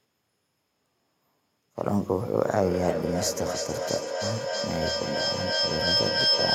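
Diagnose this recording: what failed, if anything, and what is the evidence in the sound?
Feedback howl from 2.46 s onward: a call-path acoustic loop builds a tone near 5 kHz, with repeats about every 300 ms, peaking about 1 dB above speech.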